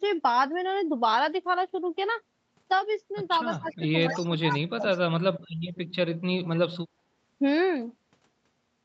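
A speech recording in which, from 3.59 to 4.87 s, the talker's level sinks by up to about 25 dB in pieces totalling around a second, likely speech suppressed in double talk as an echo canceller ducked both sides; the waveform shows a hollowed envelope and the spectrogram pales there. Overlapping this, faint delayed copies trailing the speech by 187 ms appear at 3.66–3.76, 4.02–4.27, 4.49–4.53 and 4.83–4.98 s, about 20 to 30 dB down. This is likely echo leak from a loudspeaker's echo canceller, seen as thin ghost bands under an 8 kHz ceiling.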